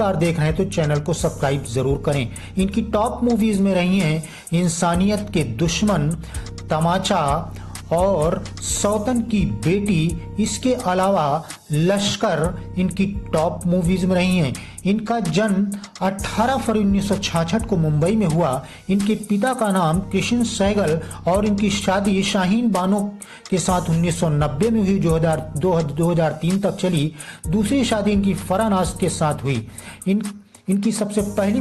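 No technical faults are audible.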